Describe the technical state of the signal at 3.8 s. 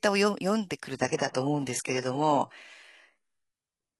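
At 3.8 s the speech is still inside a stretch of adaptive stream at a lower bitrate, running from 0.94 s to the end. After a slowdown, playback switched abruptly, without a gap, to a much thinner encoding, consistent with a low-rate HE-AAC stream. Content above 11.5 kHz is gone, and the top end sounds dull and artefact-laden.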